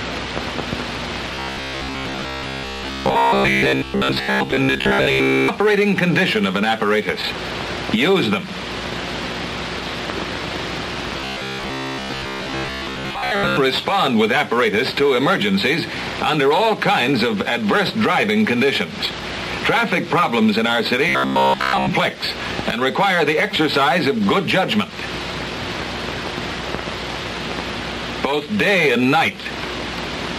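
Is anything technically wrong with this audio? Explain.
Yes. Robotic sound from repeated short buffers occurs three times: from 1.35 to 5.48 s, from 11.17 to 13.57 s, and from 21.09 to 21.90 s. In each stretch the sound takes on a rigid, metallic buzz at 66.7 Hz. The likely cause is audio arriving too slowly, so the player keeps repeating a slice of about 15 ms and skips most of the real material, stamping that fixed pitch over the sound.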